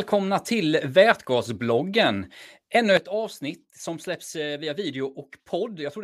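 At 2.97 s there's a sudden gain jump: the speech and the background noise both drop by about 9 dB in one step and stay down to the end. It's most likely a gain setting applied instantly, with no ramp between samples.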